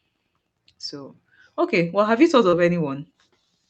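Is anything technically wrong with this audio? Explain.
Yes. At 2.49–2.56 s, just after "well have you thought", a brief smear is heard: short concealed packet loss, where about 40 ms of audio never arrived and the receiver synthesized a stand-in from the preceding sound.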